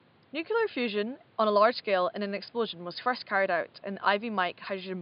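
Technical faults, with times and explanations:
Nothing stood out on listening, with only a faint room noise sitting about 33 dB below the speech.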